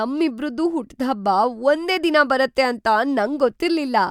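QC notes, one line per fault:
No faults found in the speech recording. Nothing in it needs flagging for QC.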